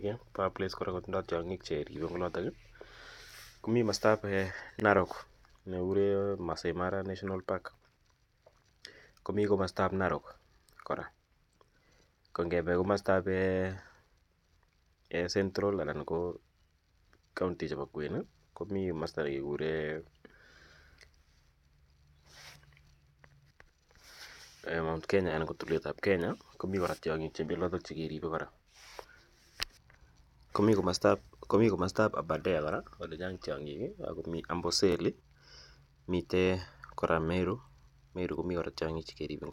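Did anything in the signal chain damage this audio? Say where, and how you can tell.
Yes. Overlapping chunks at the buffer or chunked-processing stage cause a brief stutter at 4.80, 10.82, 16.85, 22.87, 28.90 and 34.92 s, about 6 s apart. Each chunk starts 25 ms early, so that slice plays twice. A dropout would remove sound instead of doubling it.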